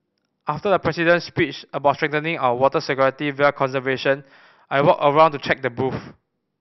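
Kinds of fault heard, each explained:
No kinds of fault are heard in this speech clip.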